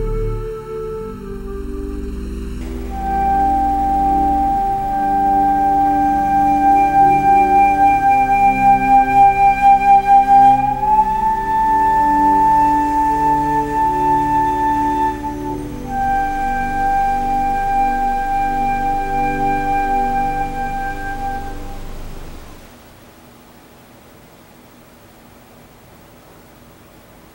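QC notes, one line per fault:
0.0–2.61 s, channel delay (comb filtering): one side is running late by well under a millisecond, around 0.7 ms, and once the two get summed to mono, everything they share cancels at regularly spaced frequencies. The first notch sits around 700 Hz, with further ones spaced roughly 1.4 kHz apart above it. Those fixed holes in the spectrum give the opening of the sound that hollow, phasey quality.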